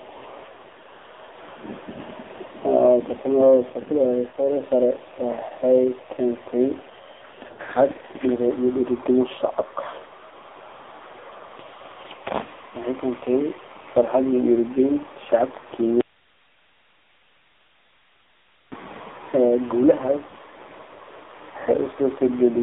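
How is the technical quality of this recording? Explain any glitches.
The recording's technical quality is poor: heavy narrowband codec damage runs throughout, with two bursts of lost frames and one long dropout.

AMR narrowband mobile codec, throughout: the speech passes through a low-rate vocal-tract model that fits a 5.9 kbps mode. It is confined to a 300 Hz to 3.7 kHz line band, so it sounds muffled, buzzy and synthetic.

Lost AMR speech frames, 7.48 to 7.65 s and 20.28 to 20.32 s: frames failed their checks, and the decoder filled the gaps by repeating its last pitch and filter settings at falling gain. At 7.48 s about 100 ms goes missing across 160 ms, with the longest run at 60 ms, giving a warbling, stretched stumble. At 20.28 s a single 20 ms frame causes a brief dip.

Audio dropout to a faint residue, 16.01 to 18.72 s: the speech cuts out abruptly for about 2.7 s, and only faint hiss remains, about 40 dB below the speech. 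The likely cause is that the signal feed was lost while the path downstream stayed live.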